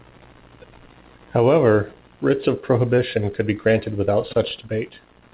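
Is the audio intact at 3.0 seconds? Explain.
No. Short concealed packet loss runs from 2.96 to 2.99 s. About 20 ms of audio arrived too late to decode. The receiver extended the preceding sound to bridge the gap, then blended back, leaving a brief smear or wobble.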